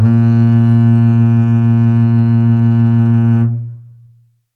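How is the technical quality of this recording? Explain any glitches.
The music has no audible glitches or technical faults.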